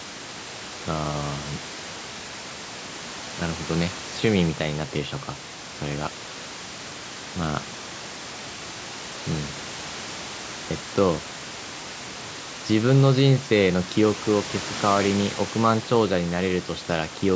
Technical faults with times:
none

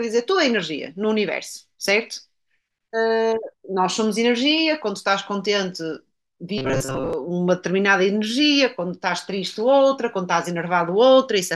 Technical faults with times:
6.58-7.13 robotic sound from repeated short buffers

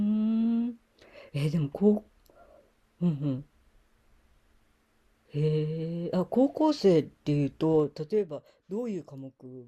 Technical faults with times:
7.70-8.28 zipper noise

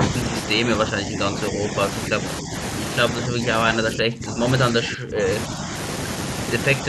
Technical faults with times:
0.00-0.33 speech suppressed in double talk
0.62-1.77 speech suppressed in double talk
2.09-2.52 speech suppressed in double talk
3.25-4.45 speech suppressed in double talk
4.71-5.29 speech suppressed in double talk

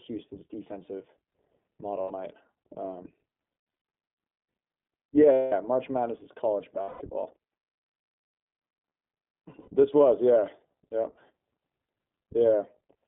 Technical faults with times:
0.00-13.07 iLBC codec
2.02-2.12 lost iLBC frames
3.52-3.83 lost iLBC frames
5.32-5.53 lost iLBC frames
6.82-7.02 lost iLBC frames
9.60-9.69 lost iLBC frames

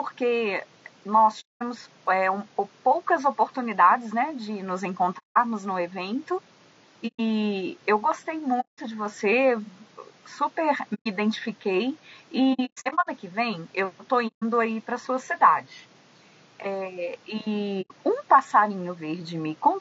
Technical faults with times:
0.00-19.80 low-delay AAC compression
1.40-1.63 AAC frame loss with muting
5.18-5.38 AAC frame loss with muting
7.07-7.20 AAC frame loss with muting
8.60-8.79 AAC frame loss with muting
10.94-11.07 AAC frame loss with muting
12.53-13.08 AAC frame loss with muting
14.27-14.43 AAC frame loss with muting
17.81-17.91 AAC frame loss with muting

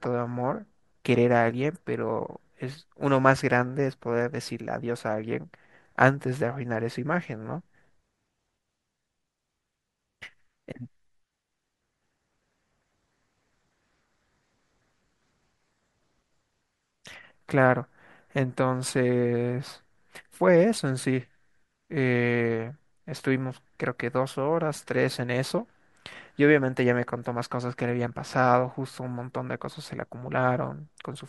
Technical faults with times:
none

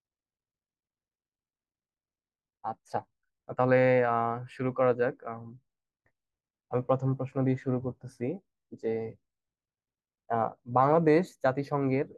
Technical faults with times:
0.00-3.78 time-stretched section

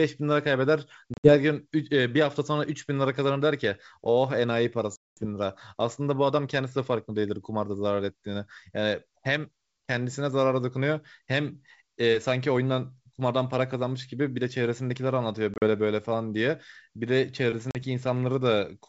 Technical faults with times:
1.14-1.36 packet loss on an ADPCM call
4.96-5.26 packet loss on an ADPCM call
15.54-15.64 packet loss on an ADPCM call
17.71-17.77 packet loss on an ADPCM call

